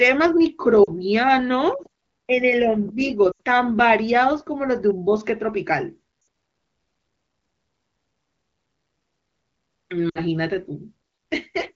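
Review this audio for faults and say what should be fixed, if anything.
Lost AMR speech frames at 0.84–0.91, 3.31–3.38, 6.21–6.27 and 10.10–10.21 s. The HD Voice decoder repeats its last good settings at falling gain, so the speech briefly smears and dips. The longest gap, about 80 ms at 3.31 s, sounds like four dropped 20 ms frames. Better radio coverage or more robust channel coding would cut these dropouts.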